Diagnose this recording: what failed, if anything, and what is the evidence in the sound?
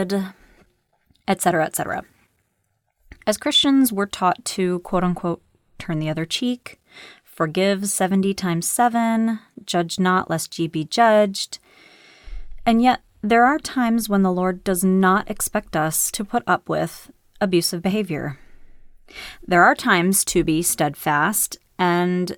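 The codec side dropped the ball here: there's a case of compressed frames skipped at 17.9 s. The speech jumps forward by roughly 20 ms, about one frame's worth, which fits a codec frame of around 23.2 ms. One frame was either missing from the file or rejected by the decoder as damaged.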